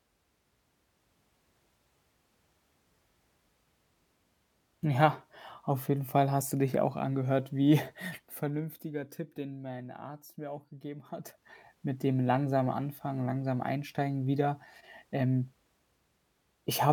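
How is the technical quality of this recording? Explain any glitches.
The recording has two glitches, both zipper noise. From 8.13 to 8.92 s the level drops by about 10 dB, and from 11.05 to 11.47 s it rises by about 10 dB. Each change moves in unsmoothed 1 dB steps, at roughly twenty per second. Every step makes a tiny click, so a ticking, zipping texture rides on the speech while the level moves.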